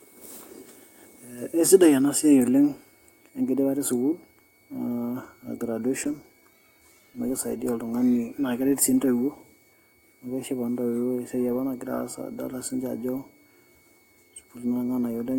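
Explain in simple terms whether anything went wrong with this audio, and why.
A switching supply whistle runs the whole way through: a faint, thin tone wavering around 2.2 kHz, from a power supply buzzing away in the audible range.

From 6.04 to 8.63 s, just before "sii intoiwuo", there's a call bitrate drop. The connection squeezed the audio into far fewer bits, so the speech turns rough and muffled, worst for about a second.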